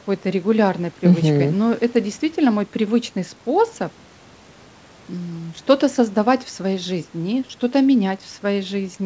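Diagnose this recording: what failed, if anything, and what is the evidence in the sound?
Nothing failed: the speech comes through a normal call chain intact, with the microphone processing's high-pass trimming only the deepest bass and the content stopping at 8 kHz, which points to a wideband call codec such as G.722 running at 64 kbps.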